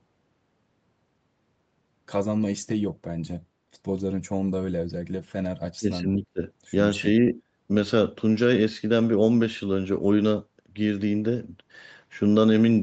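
From 5.79 to 6.42 s the speech dips hard, by about 20 dB, then again briefly at 7.21 to 7.38 s, most likely speech suppressed in double talk by the echo canceller.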